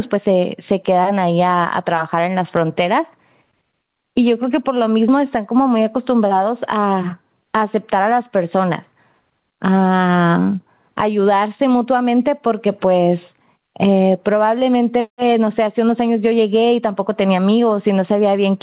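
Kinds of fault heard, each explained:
Gain pumping: throughout, the gain ducks roughly 10 dB under loud syllables, likely a fast limiter fighting excessive microphone gain.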